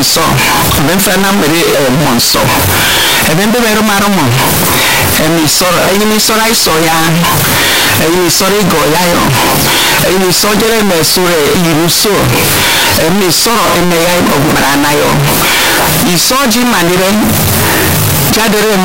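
The most likely cause is that 32-bit floating-point samples were read as 32-bit integers, a case of float read as integer present across the whole recording. Each sample's sign and exponent bits now set its level, so the waveform flattens into a near-square shape at an almost fixed, high level. The speech is very loud and harsh, background noise sits as high as the voice, yet its pitch can still be followed.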